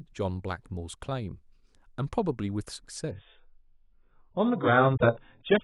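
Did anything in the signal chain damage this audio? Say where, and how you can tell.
Yes. Adaptive stream at a lower bitrate, from 3.11 s. Quality drops suddenly, with no gap. Nothing above 3.8 kHz remains, pointing to a very low network bitrate.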